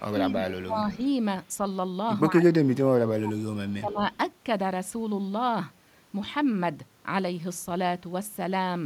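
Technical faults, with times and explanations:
0.0–0.86 s, 2.39–3.39 s and 3.8–4.0 s: speech suppressed in double talk. The speech sinks by about 20, 25 and 15 dB respectively, thinning and breaking up. This is likely an echo canceller that, with both sides talking, could not separate the talker from the echo and turned both down.
0.95–1.08 s, 3.39–3.43 s and 3.69–3.75 s: echo leak. Short, faint scraps of the speech return 157 ms late, about 35 dB below it. This is likely loudspeaker sound reaching the microphone that the echo canceller failed to remove, so it was sent back.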